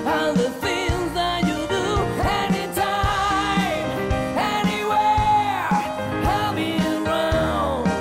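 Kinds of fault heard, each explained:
Nothing stood out on listening; the audio runs without any audible disturbance.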